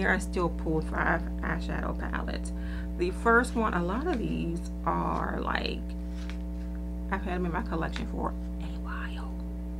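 Mains hum runs from start to finish, a steady low tone at 60 Hz sitting underneath the whole clip. Power-line current is leaking into the signal path, most plausibly through a ground loop between connected devices or from a transformer close to the cabling. The hum is strong, only a little quieter than the wanted sound, so it stays clearly audible throughout as a constant buzzy drone that never varies with the material above it.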